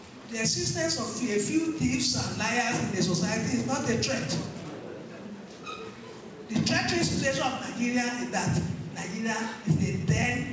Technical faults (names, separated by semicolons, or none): none